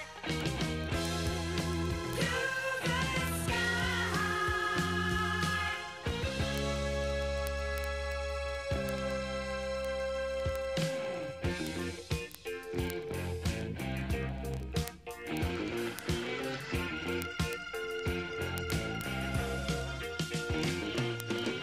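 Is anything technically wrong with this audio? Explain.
Yes. Word clock ticks run from 0.13 s to 21.60 s, through nearly the whole recording. The receiving device was clocked independently rather than locked to the sender's clock, and the two differ by roughly several hundred parts per million. As they drift past each other, one sample at a time is dropped or repeated, producing hundreds of sharp clicks of uneven strength at a steady rhythm of about one every 30 ms, riding continuously on top of the sound.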